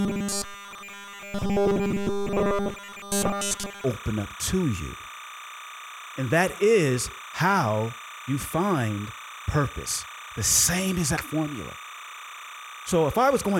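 Speech runs from 0.01 s to 3.84 s as robotic sound from repeated short buffers: a rigid, metallic buzz at 200 Hz that only loosely tracks the syllables. This is likely a playback path looping a 5 ms stretch while essentially all incoming audio is dropped. Timecode bleed runs under the whole clip, a steady chirping warble switching near 1 and 2 kHz, roughly 15 dB below the speech. The square-wave code, consistent with 29.97 frames per second, is leaking in from an adjacent track or cable.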